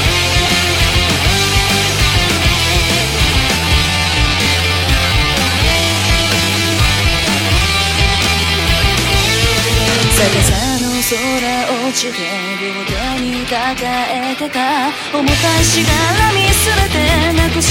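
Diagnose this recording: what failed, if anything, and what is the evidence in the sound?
A time-stretched section runs from 3.54 to 8.64 s: the pace drops abruptly to about 0.63 times normal while pitch holds, and the sound drags. The likely cause is software at the processing stage repeating short pieces to lengthen that stretch.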